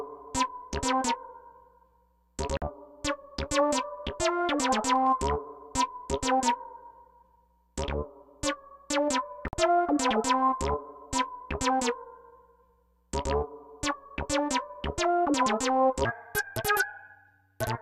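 At 2.57 s and again at 9.48 s the sound cuts to silence for about 48 ms each time, a digital broadcast dropout. The receiver muted while damaged frames failed, which fits two frames lost. Unlike an edit splice, the sound resumes further along, with the missing stretch simply gone.

From 16.05 s to the end, a section plays at the wrong speed, running 1.6 times too fast and about seven semitones high. Because tempo and pitch rise together, this differs from a pitch shift. The likely cause is playback against the wrong clock.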